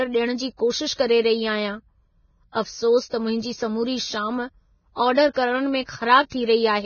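Heavy codec damage runs through the whole speech clip. Nothing reaches above 6.6 kHz. The treble is coarse, hissy and grainy. This is likely Vorbis compression at a very low rate, around 16 kbps.

Pre-echo appears three times. At 0.93 to 0.99 s, between "जी कोशिश" and "करे रही आहियां", hiss leads a sharp onset by 55 ms. It recurs at 5.84 to 5.89 s, spreading 45 ms, and at 6.29 to 6.32 s, spreading 27 ms. Block-wide quantisation noise leaks ahead, softening each attack.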